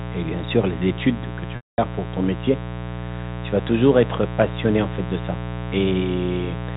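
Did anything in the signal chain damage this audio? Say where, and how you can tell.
Yes. Mains buzz enters in the analogue wiring: a raspy 60 Hz buzz, roughly 10 dB below the speech, runs throughout, drawn on a spectrogram as evenly spaced harmonic lines.

Packet loss with pitch repetition occurs on the network from 1.56 to 1.78 s: 220 ms went missing, bridged by a repeated pitch period fading to silence, seen as identical waveform cycles decaying into a gap.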